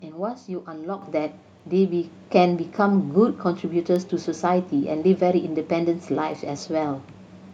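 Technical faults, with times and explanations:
0.41 to 7.50 s, word clock ticks: a receiver not locked to the sender's clock drifts around 20 ppm, dropping or repeating one sample roughly every second, producing about seven sharp ticks.
1.02 s, microphone volume stepped up: the call software raised the microphone's input gain in one step, so speech and background noise jump together by about 8 dB.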